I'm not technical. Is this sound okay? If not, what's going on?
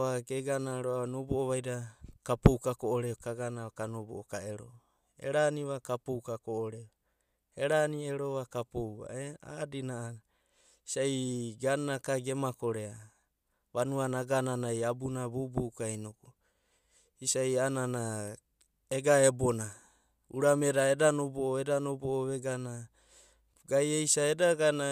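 No. There are two brief faults, at 7.72 s and 18.28 s, each heard as one sharp tick. Each is a bit error spike: a single stored or transmitted digit in the recording flipped, so one sample jumped to a wrong value and immediately came back. Because it lasts only one sample, it sounds like a sharp click rather than a gap, and it has nothing to do with the speech around it.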